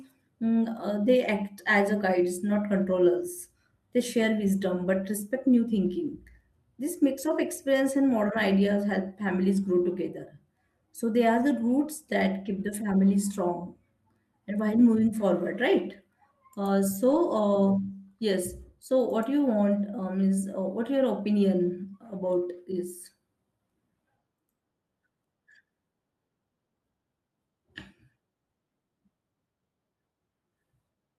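At 17.11 to 17.17 s there is a lost packet rebuilt from error correction. About 40 ms of speech turns rough and grainy, which points to two lost 20 ms packets. There is no gap. The decoder played the low-bitrate copies that the next packets carried. The same happens at 22.53 s, this time for about 20 ms, likely a single packet. Each is heard as a brief smear of noisy, coarse sound.

From 23.27 to 25.27 s there are periodic USB or driver dropouts. Something blocks the audio path about every 0.25 s. Each time, a sliver of audio of about half a millisecond is skipped outright, not filled. Around ten of these occur. They are heard as a steady train of small ticks, evenly spaced, riding on the speech.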